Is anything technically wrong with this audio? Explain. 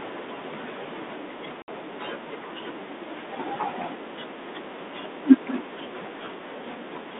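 Yes. From 1.62 to 1.69 s the speech cuts to a hard-edged silence of 60 ms, then returns slightly distorted before settling. This is packet loss on an ADPCM call: a few packets were replaced by silence, leaving the decoder's adaptive predictor and step size out of step with the sender's.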